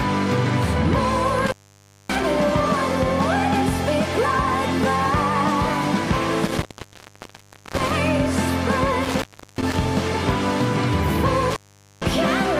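The sound drops out, with crackle at each edge and faint hiss in the gap, at 1.38–2.23 s, 6.45–7.91 s, 9.04–9.76 s and 11.50–12.06 s. This is intermittent contact: a loose cable or plug briefly opening, silencing the line for about 0.57, 1.12, 0.36 and 0.45 s.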